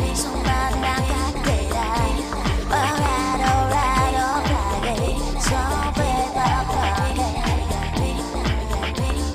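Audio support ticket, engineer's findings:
Listened through the whole thing and nothing jumped out: no dropouts, glitches or anything else worth flagging on this one.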